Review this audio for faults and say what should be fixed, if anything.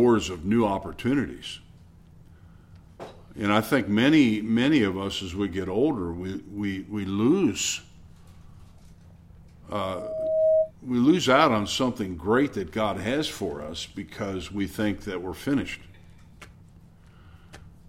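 A loudspeaker feedback squeal runs from 9.74 s to 10.71 s. A single tone at 633 Hz swells over most of a second until it sits a few decibels above the rest of the audio. A microphone is picking up the loudspeaker it feeds, and at 633 Hz the loop gain exceeds one, so that frequency keeps feeding itself. On a spectrogram it shows as one bright horizontal line that grows in intensity. The waveform envelope rises steadily over the same span. To prevent it, lower monitor gain, move the microphone out of the loudspeaker's coverage, or notch 633 Hz in the feed.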